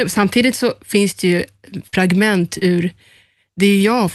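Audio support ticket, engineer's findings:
Burst of packet loss, 1.87–1.95 s: held, decaying continuation of preceding sound for about 50 ms, then audio resumes with roughly 60 ms skipped. Jitter buffer/decoder concealment extending last frame across consecutive lost packets.

Short concealed packet loss, 2.59–2.63 s: brief smear, about 20 ms of signal absent and patched. Decoder concealment synthesising from the last frame, then crossfading into received audio. Call path top end stops near 12 kHz, consistent with Opus super-wideband coding.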